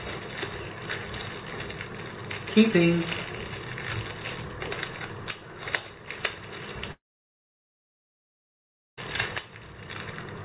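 At 6.92 s the sound breaks off. The last sound carries on briefly as a fading buzz, then gives way to about 2.0 s of silence. Sound returns at 8.99 s, with roughly 2.06 s lost. This is likely a long network dropout. Throughout, nothing reaches above 4 kHz, which fits a G.711 mu-law call path at 64 kbps.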